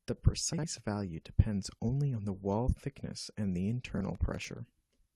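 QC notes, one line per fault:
0.53–0.64 s and 3.95–4.01 s, frames out of order: a brief garbled flutter, just before "value depends only on" and just after "wall thickness and the". Two neighbouring blocks, about 52 ms and 26 ms long, were swapped and played halves-reversed, so no time is lost.
4.15–4.57 s, processor overload crackle: a gritty, crackling tear rides on the speech for about 0.4 s, then stops. The processor repeatedly missed deadlines for very short buffers, under a millisecond each, replaying stale audio with hard edges, which fits around twenty missed buffers.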